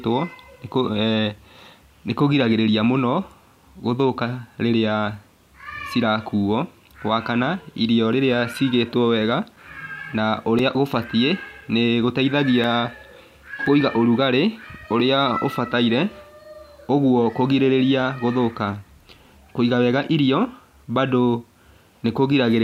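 From 8.54 to 13.66 s, periodic USB or driver dropouts leave few-millisecond silent gaps every 1.02 s: regular ticks, flat waveform notches, vertical spectrogram stripes.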